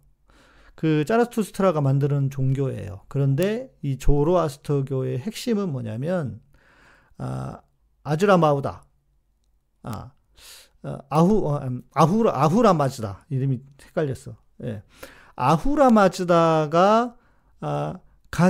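Bit error spikes at 3.43, 9.93, 11.15 and 15.90 s break into this speech clip as isolated sharp ticks. Each comes from a single flipped bit in memory or on a digital link, which throws one sample, or two or three in a row, off by a power of two before the signal snaps back. The result is a broadband click unrelated to the speech. The first tick is about 12 dB louder than the other three.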